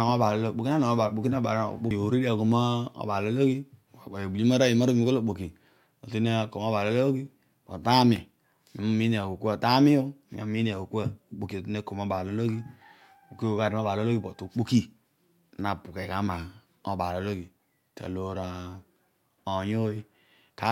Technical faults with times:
none

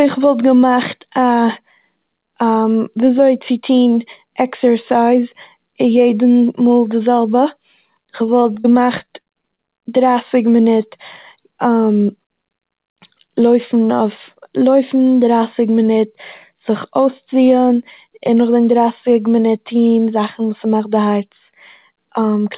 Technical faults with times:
8.26-9.60 repeated packet loss (robotic sound)

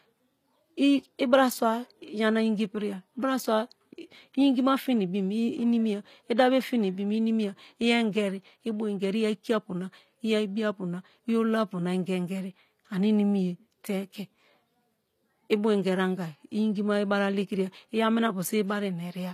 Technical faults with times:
0.00-19.33 HE-AAC compression

